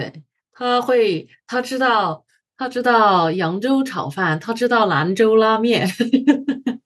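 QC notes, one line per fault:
0.41–6.01 s, automatic gain rising: the level climbs steadily by about 11 dB over more than five seconds as the gain control keeps raising its gain on a quiet input. The background noise rises with the speech, and the ramp is slow and one-way, unlike compressor pumping, which follows each loud syllable.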